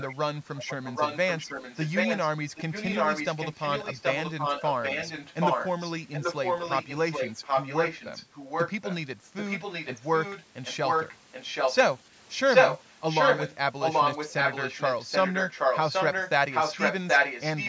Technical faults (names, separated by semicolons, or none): echo leak